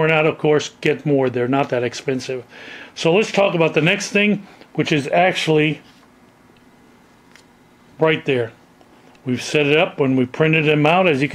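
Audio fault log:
No faults were found in this recording. There is no dropout, glitch or other disturbance to report at any point.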